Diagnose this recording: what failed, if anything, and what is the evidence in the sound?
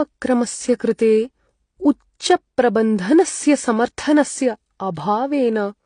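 Transcoding between lossy codecs, present throughout the speech, is a codec-stage fault. Nothing is heard above about 9.8 kHz, and that hard ceiling comes with artefacts of two different kinds layered together. The likely path is a low-rate HE-AAC encode, around 32 kbit/s, later re-encoded to AAC-LC at a similar rate. The second encoder wasted its bits reproducing the first one's damage, added its own, and kept the earlier band limit.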